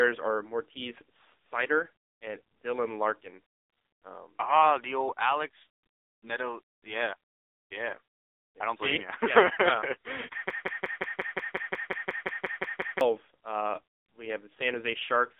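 Throughout, the speech carries heavy AMR narrowband mobile codec damage. The sound is confined to roughly 250 Hz to 3.7 kHz with nothing above, and the sparse pulse-driven vocal-tract model leaves a buzzy, synthetic quality, which fits a low AMR-NB rate near 6.7 kbps.

From 10.50 s to 13.01 s, a broken-record loop repeats a 178 ms fragment back to back 14 times, with exact, mechanical stutters. The likely cause is a stall in the player or stream that kept resending its last buffer, so the speech that should have filled those 2.5 seconds is lost.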